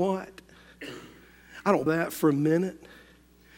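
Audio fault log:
1.83–1.86 s, damaged data in a compressed stream: a short glitch cuts across the speech for about 30 ms. Bytes in the encoded stream at this point are corrupted, so the decoder cannot read the frames properly, briefly loses frame sync and hunts for the next valid header. Normal decoding then resumes.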